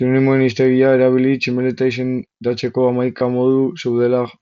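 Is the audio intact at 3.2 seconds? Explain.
No. From 3.18 to 3.21 s, roughly 22 ms, there is concealed Bluetooth headset packet loss, which fits a short run of about three lost packets. The receiver covered the gap by repeating the best-matching stretch of the preceding waveform, so the sound turns briefly buzzy and tonal at full level, with a slight warble as real audio resumes. A plain dropout would go silent or click; here the level never falls.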